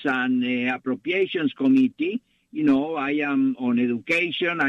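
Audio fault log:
2.76–3.09 s DAB burbling. Bit errors, around a third of a percent, slip past error correction, so wrong samples put short blips of noise in single sub-bands, and wrong scale factors make sub-bands jump in level for up to a frame.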